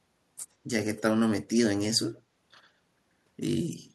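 Echo leak at 0.94–1.02, 2.17–2.21 and 3.60–3.64 s: faint, discrete speech copies return about 110 ms late, likely loudspeaker pickup escaping the far-end echo canceller. Reverb would be a smooth decaying tail.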